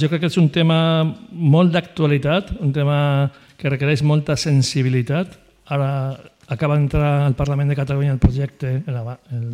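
From 7.19 to 9.19 s, a faint chirping warble sits behind the sound. This is timecode bleed. Linear timecode running at 24 frames per second has leaked in from a nearby line. Its square wave flips between roughly 1 and 2 kHz, about 45 dB down.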